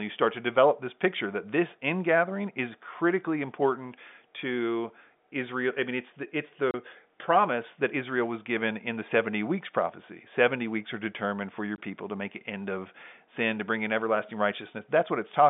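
A speech clip carried over G.711 telephone coding, so it's narrowband, roughly 150 Hz to 3.6 kHz. The fault is packet loss filled with silence: two short dropouts with hard edges. The first runs 6.71 to 6.74 s (30 ms), right after "mean it's the it's" and before "promise that." The second, 11.76 to 11.78 s (20 ms), falls between "are determined for your" and "people to make an." Both gaps look like 10 ms packets that never arrived, with the receiver playing silence instead of concealing the loss.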